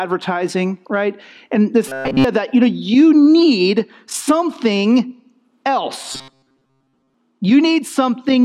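From 1.88 to 2.24 s and again from 6.12 to 7.14 s, the sound turns rigid and metallic, locked onto a 133 Hz buzz. This is robotic sound from repeated short buffers, likely caused by a segment of about 7.5 ms being replayed over most of each stretch.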